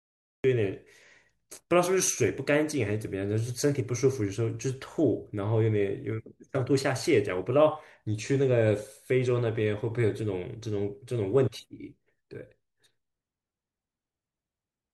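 From 0.00 to 0.44 s there is digital silence, then the speech enters abruptly mid-sound: a cut-off start. Capture began after the talker was already under way, so the onset has no natural attack or lead-in and the first syllable arrives truncated.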